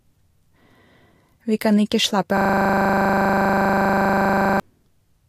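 At 2.38 s a system hang loop begins: the system froze while the sound hardware kept replaying one 40 ms ring buffer, giving a 25 Hz buzz until 4.60 s.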